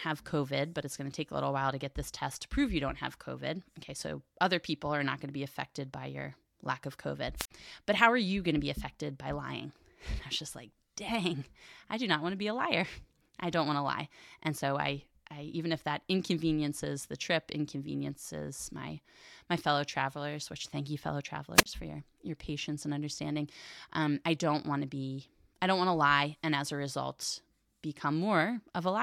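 Speech, broken twice by a brief burst of hiss collapsing into a near-silent hole: 7.36–7.51 s (mute about 53 ms) and 21.55–21.66 s (about 29 ms), between "which thank you fellow" and "for your your patience". This is wireless microphone squelch dropout: the radio signal fades until the receiver's squelch mutes the output.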